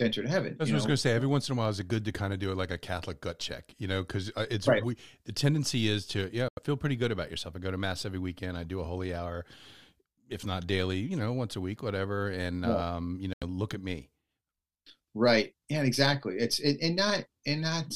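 A Bluetooth stall, likely from the headphone buffer running dry, silences the speech for 86 ms at 6.48 s after "tendency is to yeah" and for 83 ms at 13.33 s after "yeah um you", before playback resumes.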